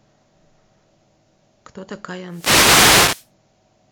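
At 2.28 s the radio link of an analogue FM wireless microphone starts to fade, most likely because reflected signals arriving at the receiver partly cancel the direct one. This wireless microphone noise hit lasts about one second, to 3.31 s. With the carrier weakened, the receiver's own noise rises into the speech as a hissing swish of static, roughening and partly masking the speech until the signal recovers near the end of the clip.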